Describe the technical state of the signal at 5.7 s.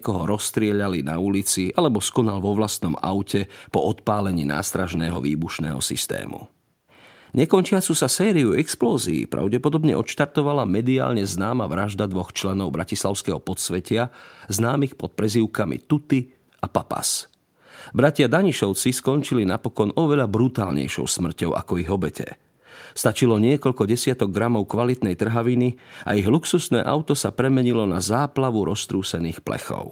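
At 5.7 s the speech signal is intact, with no dropout, clipping, distortion or other fault audible at that moment.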